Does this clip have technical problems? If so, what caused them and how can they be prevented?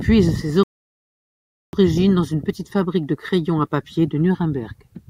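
Yes. A rebuffering stall runs from 0.63 to 1.73 s: the player exhausted its downloaded audio, fell silent for 1.1 s while waiting for data, then resumed exactly where it stopped with "dans une petite fabrique", so nothing is lost but time is added. A larger playback buffer or an adaptive bitrate that drops quality before the buffer empties would prevent it.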